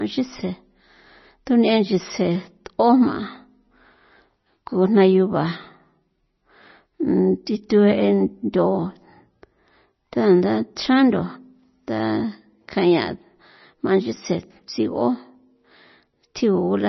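Speech throughout the clip carries the sound of MP3 compression, heavy enough to suggest a low bitrate around 24 kbps. Nothing survives above about 5.9 kHz, so sibilants lose their edge and the speech sounds dull and muffled, while the remaining band has a watery, swirling quality from weak components dropping in and out. On a spectrogram this shows as a flat ceiling at 5.9 kHz with blank space above it and speckled, patchy energy below, which is likely the result of an encoder starved of bits.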